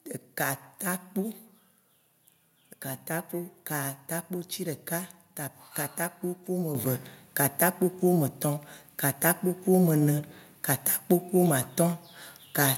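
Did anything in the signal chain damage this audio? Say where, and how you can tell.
Yes. At 6.75 s, just after "katakpo ku", the microphone volume stepped up by about 7 dB in a single jump. Voice and background noise rise together, which places it in call processing rather than the acoustics: the software judged the input too quiet and raised the device's input gain instead of ramping it. There is no fade, only an abrupt and lasting change in level.

From 9.12 to 9.20 s there is loose connector crackle, an irregular burst of scratchy clicks lasting about 80 ms. This is in the analogue wiring. A worn or dirty contact is briefly making and breaking, chopping the signal on and off, and any DC on the line turns each break into a pop. The ragged, non-periodic texture points to a mechanical contact fault rather than a digital dropout.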